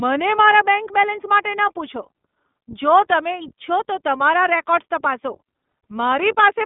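Throughout the speech, the iLBC codec limits the band to about 200 Hz to 3.6 kHz, with nothing above 3.7 kHz. The excitation of each frame is coded independently, which leaves a plainly audible rough, synthetic edge consistent with 20 ms frames at 15.2 kbps.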